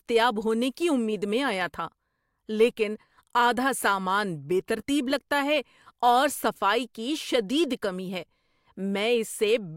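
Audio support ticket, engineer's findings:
No audible faults found on review.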